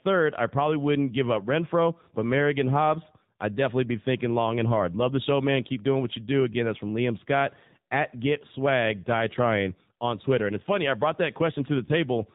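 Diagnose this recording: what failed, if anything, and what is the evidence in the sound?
AMR narrowband mobile codec, throughout the speech: at the codec stage, nothing above 4 kHz survives, and the voice has a plainly buzzy, synthetic edge. The sparse pulse excitation driving the vocal-tract model points to a low mode of about 7.4 kbps.

Lost AMR speech frames, at 11.86 to 11.90 s, just after "funny I brought that": a network-stage failure heard as a brief dip or warble. This fits a single 20 ms frame failing its checksum, with the decoder reusing the last pitch and vocal-tract settings at reduced gain.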